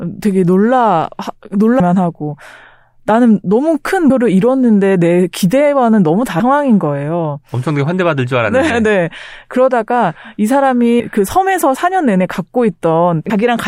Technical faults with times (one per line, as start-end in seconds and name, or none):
1.80 audio missing between chunks
4.10 audio missing between chunks
6.40 audio missing between chunks
11.00 audio missing between chunks
13.30 audio missing between chunks